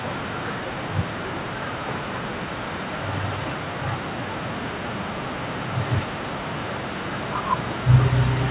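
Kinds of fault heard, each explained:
No faults are heard.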